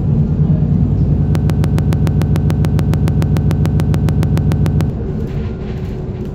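At 1.35 s the audio locks into a broken-record loop. A fragment of about 144 ms repeats exactly, back to back, 25 times until 4.90 s, giving a stuttering, mechanical rhythm at roughly seven repeats per second. The likely cause is a stalled player, encoder or stream that kept resending the last fragment it held. Whatever should have played during those 3.5 seconds is missing, and the sound resumes afterwards without it.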